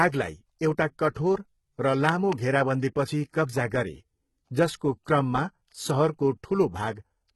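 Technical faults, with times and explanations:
Throughout, HE-AAC compression: the treble sounds like it's been rebuilt rather than captured, and the damage from the codec is heavy. That's most likely HE-AAC at a low rate, somewhere around 16 kbps. Only the lower spectrum gets coded properly, and the top is filled in by copying lower bands upward and shaping them with a rough envelope. That's why s sounds come out gritty or lispy, with harmonics that don't line up. Nothing reaches above about 11.8 kHz.
1.11 to 1.16 s, pre-echo: a short hiss smears in roughly 53 ms ahead of a sharp attack, and the onset loses its edge. The codec spread its quantisation noise across the whole transform block. The attack landed late in that block, so noise meant for the loud part leaked back into the quiet gap in front of it, and you hear the attack coming before it actually arrives.
2.09 to 2.35 s, loud pop: two sharp pops sit on top of the speech right before "घेराबन्दीपछि कब्जा गरे", peaking somewhere around 15 dB above the signal, and the speech carries on underneath them. 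This is likely a sudden voltage step or pulse, from a plug, a switch, static or a driver glitch, getting added into the signal path, which is why they sound like pops sitting on the audio rather than part of it.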